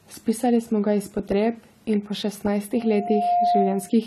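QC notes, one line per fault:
Throughout: AAC compression. The band stops near 14 kHz and the speech carries plainly audible codec damage, likely from AAC-LC encoding at a rate that fits about 32 kbps. The encoder quantised the spectrum coarsely against a hearing model and cut the top off.
2.74–3.98 s: loudspeaker feedback squeal. Just after "in po", a single 705 Hz tone swells over about half a second and settles about 5 dB above the speech. The microphone-to-loudspeaker loop had gain above one at that frequency, so it kept growing.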